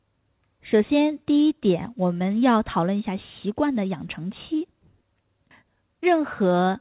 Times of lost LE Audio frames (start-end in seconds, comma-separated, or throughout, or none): none